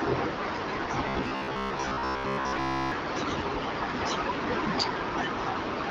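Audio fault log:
1.09–2.92 s, robotic sound from repeated short buffers: new audio likely arrived too seldom, so playback looped a fragment of about 15 ms and skipped most of the real speech, forcing a rigid, metallic 66.8 Hz buzz onto the lightly coded AMR-WB voice.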